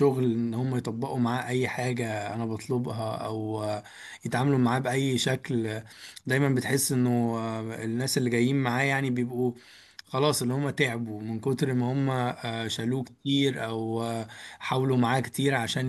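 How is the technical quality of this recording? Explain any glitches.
No glitches or technical faults can be heard anywhere.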